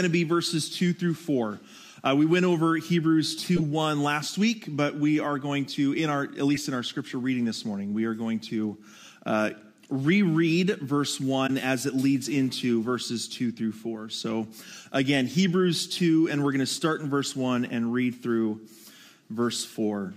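Three short blips cut through the audio at 3.56 to 3.62 s, 6.54 to 6.58 s and 11.46 to 11.50 s, the first and last noticeably louder. These are corrupt frames decoded: flipped bits in a few compressed frames made the decoder place energy at wrong frequencies.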